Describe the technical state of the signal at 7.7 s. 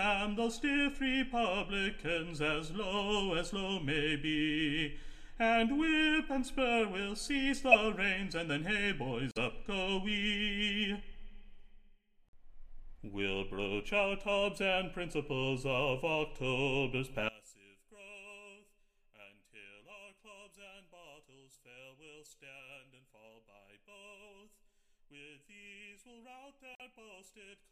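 A brief, fairly loud chirp, blip or burst of misplaced noise cuts in from 7.71 to 7.75 s: a corrupt frame decoded. Damaged bits in a single compressed frame were played anyway, scattering energy across wrong frequencies.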